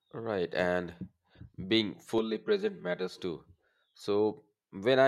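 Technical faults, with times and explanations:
2.18–3.18 s: channel delay (comb filtering). For this one-second stretch the speech turns hollow and phasey. One channel arrives around 5 ms behind the other, and when the two are summed to mono, the content common to both cancels at evenly spaced frequencies. With that delay the first notch falls near 100 Hz, and further notches repeat every 200 Hz or so up the spectrum. The fixed notches thin the low end and give the voice a comb-like, tubey colouration until the channels realign.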